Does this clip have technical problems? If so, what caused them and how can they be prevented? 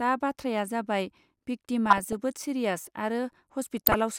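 Yes. Weak reception let bit errors slip past the DAB error correction into the MP2 data, briefly throwing single sub-bands out of level. The result is DAB burbling over the speech at 1.86–2.13 s and 3.77–3.94 s. A stronger signal, through better antenna placement or a closer transmitter, keeps errors within what the correction can repair.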